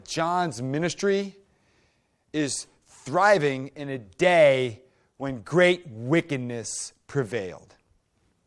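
No technical faults are audible.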